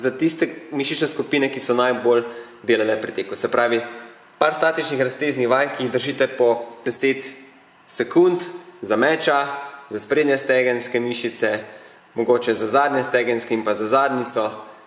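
No technical faults can be heard anywhere in this audio.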